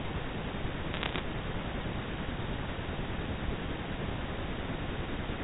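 From 0.94 to 1.19 s the speech picks up a burst of crackle from bit errors on a digital phone line, with about one bit in a hundred flipped. Each hit alters a single sample, so the ticks sit over intact speech rather than cutting gaps as dropouts would.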